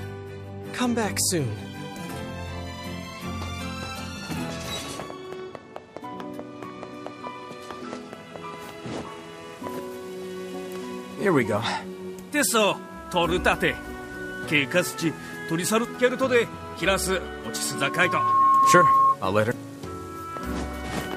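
At 17.56 s a loudspeaker feedback squeal starts: a single 1.1 kHz tone swells over about a second until it's riding roughly 10 dB above the audio, then cuts at 19.17 s. The mic was hearing its own speaker and the loop ran away at that frequency.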